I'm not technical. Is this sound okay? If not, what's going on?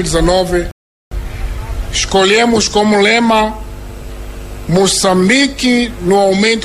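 No, not quite. At 0.71 seconds the sound suddenly drops to silence. It comes back at 1.12 seconds and carries on exactly where it stopped. This is a rebuffering stall. The player ran out of audio it had already downloaded, so it paused until more arrived. Nothing is missing or damaged. The pause simply adds about 0.4 seconds of dead air that shouldn't be there.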